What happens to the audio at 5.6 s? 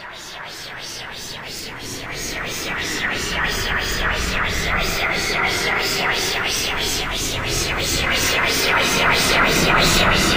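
Nothing goes wrong at 5.6 s: the audio plays through that moment intact, with no dropout, click or other fault.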